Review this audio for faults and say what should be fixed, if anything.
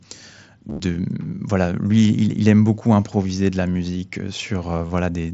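Concealed Bluetooth headset packet loss occurs at 0.69–0.80 s (scattered gaps, longest 30 ms), 1.90 s and 4.87–4.90 s. Lost packets were filled by repeating recent waveform, giving a brief buzzy tone. The waveform shows identical copied cycles at steady level, and a spectrogram shows flat, evenly spaced harmonic stripes. Keeping the headset close to the phone, clear of obstructions and 2.4 GHz interference, would prevent it.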